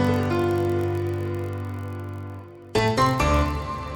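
Throughout, a steady buzz near 43.1 Hz runs under the sound. It comes from a block size mismatch (padded), with brief zero gaps in each block of 1024 samples.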